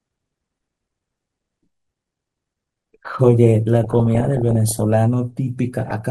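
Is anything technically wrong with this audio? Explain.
Yes. Throughout the speech the sound is dull and plainly gurgling, with a granular edge and missing top end. This is likely MP2 compression at a low rate, roughly 80 kbps, where upper sub-bands switch off and the remaining bands are coarsely quantised.

From 3.84 to 4.82 s, and briefly from 5.77 to 5.91 s, bursts of burbling break over the speech. This is DAB burbling: bit errors, at a rate under one percent, slip past error correction and corrupt the MP2 data, putting short blips of noise in single sub-bands.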